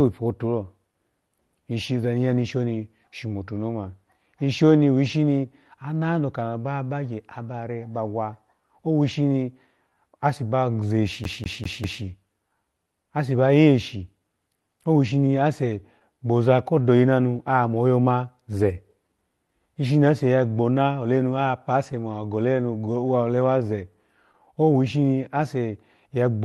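From the first moments to the end, the sender's clock runs about 3 percent slow against the receiver's, a clock drift between sender and receiver. The jitter buffer keeps draining, so timing never settles. Unlike a single dropout, this drift leaves the whole clip subtly unsteady.

Repeated timing corrections run from 0.24 s to the end, pacing playback at 97 percent of normal as the receiver stretches and repeats tiny slices to cover the slower feed. These edits all push the same way at uneven spacing, heard as a faintly wavering tempo rather than distinct clicks.

Between 2.35 and 6.90 s come scattered short gaps, roughly three of them, the longest around 15 ms. Each hole is patched by prolonging the preceding sound, so it registers as a brief smear or tick. These are isolated losses, not the steady drift underneath.

From 11.24 to 12.04 s the CD is stuck on one turn. The same 0.20 s segment repeats four times with a short mute at each jump. 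This fast, evenly spaced stutter is what separates it from the irregular timing hiccups elsewhere.

From 20.20 to 25.42 s a second run of scattered short gaps appears, about four this time, none longer than roughly 10 ms. Each is concealed by stretching the last sound. The audio came through an Opus call path limited to 12 kHz, with coding that points to around 32 kbps.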